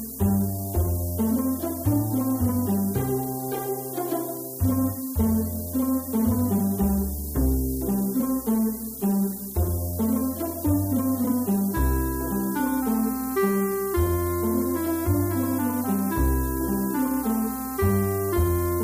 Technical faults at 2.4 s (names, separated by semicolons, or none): low bit depth with noise shaping